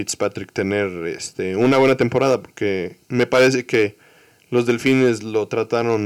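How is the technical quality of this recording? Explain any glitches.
The recording has repeated hard clipping on the louder stretches of speech, at 0.22–0.59 s, 1.61–2.35 s, 3.19–3.84 s, 4.56–5.09 s and 5.58–5.95 s. The level overshot what the chain could pass by about 2 dB in the first and last, about 8, 10 and 6 dB in the middle three, so waveform peaks were cut flat. Those squared tops add high harmonics: crackle at the mild overloads, harsh fuzz at 1.61–2.35 s and 3.19–3.84 s.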